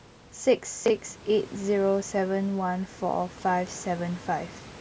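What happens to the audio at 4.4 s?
At 4.4 s the speech carries on intact, with nothing more than the ordinary band-limiting of call microphone processing, which leaves no content above 8 kHz.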